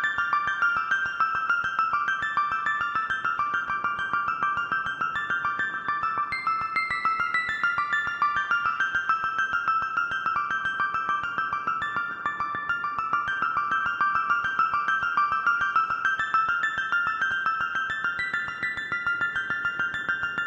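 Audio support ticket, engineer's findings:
Damaged data in a compressed stream. Three short glitches: 3.67–3.69 s, 10.34–10.36 s, and 17.30 s. Each lasts 20 ms or less. Probable component: the compressed file or stream feeding the decoder. Mechanism: bytes lost, zeroed or overwritten in transit or storage. The decoder misreads the affected frames, loses sync, then finds the next frame header. The blip is the misdecoded fragment. Next step: check source file integrity and the transport path.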